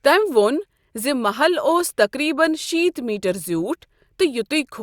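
A short speech recording with no audible technical faults anywhere in the signal.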